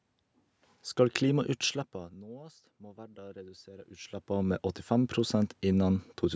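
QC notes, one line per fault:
2.79–6.09 s, automatic gain rising: after the level reaching the mic fell by about 19 dB, the gain control decided things were too quiet and slowly wound its gain up by about 6 dB over those three-odd seconds. The voice and the room noise swell together because the whole signal is being boosted, not just the talker. The level shifts around 1.5 s and 4 s are just the talker moving.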